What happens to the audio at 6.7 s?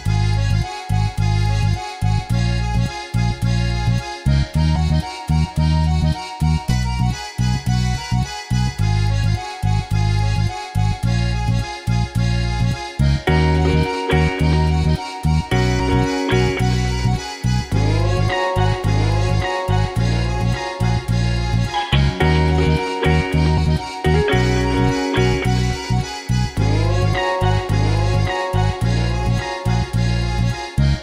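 Compressed frames are skipped from 6.69 to 6.73 s: a run of whole frames never plays, so the audio leaps forward by roughly 150 ms, which fits about seven 20 ms frames.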